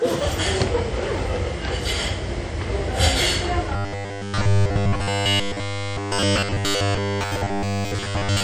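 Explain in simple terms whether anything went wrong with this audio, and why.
Yes, two things went wrong. The whole recording has a ringing, washy quality, with a hiss that swells and fades along with the sound. That points to WMA compression, which likely smeared and thinned out fine detail to save space.

From about 3.76 seconds to the end, the sound turns into a stiff, metallic buzz. This is robotic sound from repeated short buffers. A tiny slice, about 10 ms, likely kept repeating while new audio was skipped. That forces a fixed 100 Hz hum over everything.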